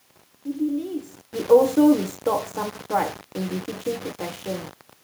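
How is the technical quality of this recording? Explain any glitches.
The recording is marred by coarse, grainy distortion on the speech throughout, consistent with low bit depth without dither. Rounding each sample to so few levels leaves an error that follows the waveform, roughly 25 dB below the signal, which points to around 6 bits. The likely cause is reduction without dither. Unlike steady hiss, this grit rises and falls with the speech, roughening quiet syllables. The level change near 1.0 s, when the talker moved, and the room noise are not faults.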